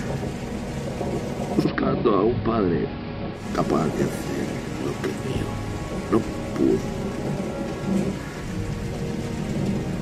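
From 1.55 to 3.47 s, digital radio blending to analogue: a 152 ms fade into AM brings hiss about 25 dB below the signal and about 2 dB lower level.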